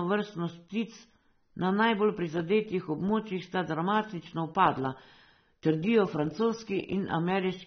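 Speech runs the full clip with AAC compression artefacts: nothing above 6.3 kHz, plus smeared, warbling, fizzy sibilants. That texture separates it from a plain low-pass filter. It likely comes from AAC-LC coding at a low bitrate, around 24 kbps, throughout.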